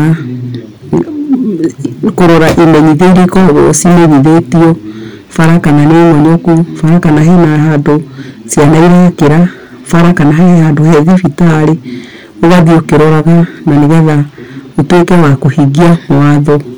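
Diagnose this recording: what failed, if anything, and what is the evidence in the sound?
Hard clipping runs through the whole speech recording: the signal was driven about 22 dB past what a converter or fixed-point gain stage could pass. Nearly a third of the waveform sits flattened at its peaks, and the spectrogram shows smeared harmonics far up the spectrum, heard as harsh fuzz on every loud sound.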